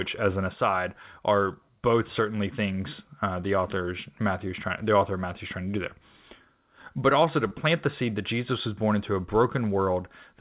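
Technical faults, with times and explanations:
7.48–7.53 s, short concealed packet loss: between "also to" and "the seed" the sound briefly smears and wobbles. About 20 ms of audio missed decoding, so the receiver continued the preceding sound for 28 ms before blending back into the real signal.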